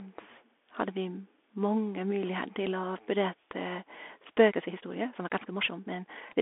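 Speech squeezed through a Bluetooth CVSD headset codec the whole way: nothing above about 3.8 kHz, a thin 250 Hz to 3.5 kHz line band, plus that gritty one-bit hiss and scratchy s sounds where the adaptive step can't keep up, which fits a 64 kbps link. From 4.46 s to the end there's a time-stretched section, with the pace jumping to about 1.52 times faster while the pitch holds. It sounds rushed, likely from software dropping short slices to fit a length.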